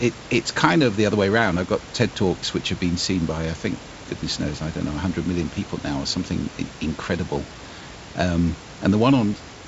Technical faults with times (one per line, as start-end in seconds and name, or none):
none